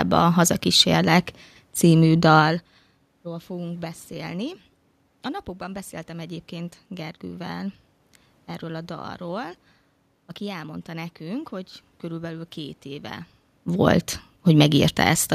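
No technical faults can be heard in this speech recording. Room noise sits underneath it, and the talker's level shifts at about two and a half seconds and again near the end as they move relative to the microphone.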